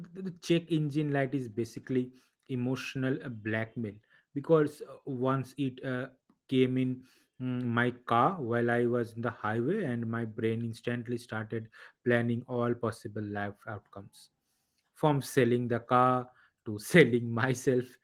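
Nothing goes wrong in this speech recording, and there's no fault here worth pointing to.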